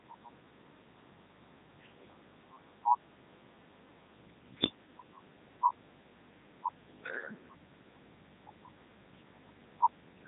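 A speech clip passed through the Codec 2 vocoder for its full length, and the damage is heavy. The voice sounds robotic and buzzy because the decoder does not reproduce the original waveform. It rebuilds the sound from sine waves driven only by pitch, voicing, energy and a coarse spectral envelope. Nothing is present above 3.8 kHz. The character points to Codec 2's highest-rate mode, around 3.2 kbit/s.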